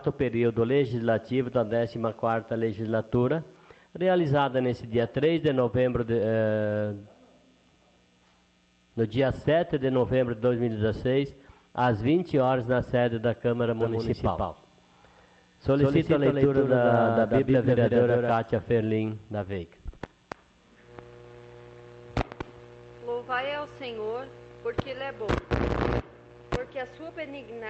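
A doubled audio track runs from 13.81 s to 18.33 s. A second full-band copy of the same sound trails the first by around 150 ms at roughly equal loudness, giving a hard, slap-like echo with no decay or room colour. It starts and stops abruptly at those edges. The likely cause is the signal being picked up a second time through a slower route, or an edit holding two copies out of step. The clip carries the call path's 8 kHz band limit, which fits Opus at about 32 kbps.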